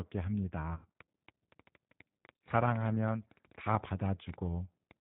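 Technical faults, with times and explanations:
Throughout, G.729 codec: the speech has been squeezed through a narrowband 8 kbit/s codec, which points to G.729A. Each 10 ms frame is rebuilt from a vocal tract filter, a pitch predictor and a handful of pulses. The damage is plainly audible: nothing above 4 kHz survives, so the sound is muffled, and the synthetic reconstruction gives the voice a rough, slightly buzzy texture rather than a natural one.
0.73 to 0.89 s and 2.36 to 2.48 s, VoIP packet loss concealed by the speech codec: packets went missing and the decoder filled the gaps by extending its last pitch and filter settings while turning the gain down. In the first stretch about 170 ms of audio was lost, scattered over roughly 260 ms, with the longest unbroken gap around 70 ms. In the second about 80 ms was lost over roughly 100 ms, with the longest gap about 50 ms. The speech smears into a fading sound and stays weak for a moment afterwards, because each frame is built on the one before.
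1.0 to 4.92 s, train of clicks: short, similar pulses tick over the sound at about seven per second with irregular spacing, around thirty in all. They reach roughly 10 dB above the speech level, so they stand out sharply and carry on through pauses. Repeated pulses of the same shape at this pace are likely caused by electrical interference or a faulty connection or power supply.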